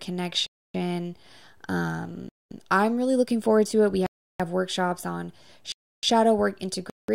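Blocks of digital silence cut the speech at 0.46–0.74 s, 2.29–2.51 s (before "I'm really looking forward"), 4.06–4.40 s (before "workshops on"), 5.72–6.03 s (after "workshops on") and 6.90–7.08 s. The output cuts straight to silence and back. The holes last 190–330 ms, the last fitting an 8192-sample buffer left unfilled.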